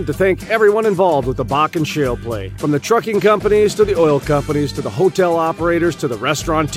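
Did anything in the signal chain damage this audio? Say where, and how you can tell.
No, I can't hear anything here that points to a problem anywhere along the chain, so there's nothing to track down.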